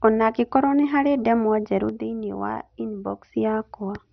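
A speech recording that sounds dull and muffled throughout, with a gurgling, grainy texture on the voice and nothing above about 6.2 kHz. The pattern points to MP2 compression, most likely at a low bitrate around 48 kbps. MPEG Layer II divides the spectrum into 32 equal sub-bands and shares out a limited bit budget among them. At this rate the upper bands are shut off entirely, and the bands that remain flicker and are coarsely quantised, which produces the granular distortion. From 1.89 s to 3.34 s the level drops abruptly by about 6 dB and then returns. That sudden, flat step is the signature of one channel dropping out. The likely cause is that one stereo channel was lost for that stretch before the mono sum, so the material common to both channels came through at half amplitude and anything present only in the missing channel vanished.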